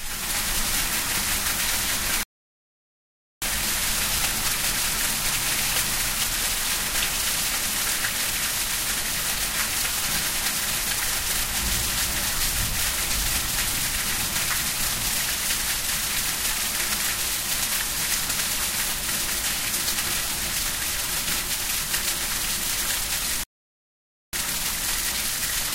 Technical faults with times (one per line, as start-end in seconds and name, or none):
2.23-3.42 rebuffering stall
23.43-24.33 rebuffering stall